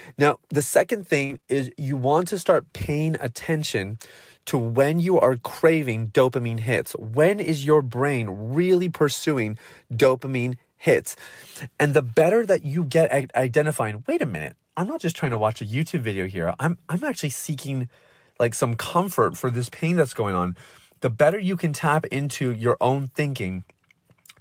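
From 1.25 to 1.49 s, between "now the second" and "is you want to", repeated packet loss gives a choppy, robotic stretch. Four gaps, the longest 37 ms, were patched by extending the preceding sound, so about 42% of the span is concealed. The waveform shows smeared, repeated cycles, and the spectrogram shows blurred, static harmonic bands with breaks.

At 15.25 to 15.39 s, between "minute I'm not just" and "watch a", a lost packet was rebuilt from error correction. About 80 ms, which fits four 20 ms frames, was decoded from low-bitrate copies. There is no gap, but the sound turns rougher and noisier, with grainier, less defined spectrogram detail.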